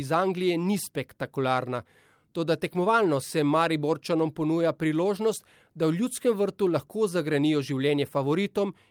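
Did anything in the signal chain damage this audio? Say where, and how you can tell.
No, no chain damage heard.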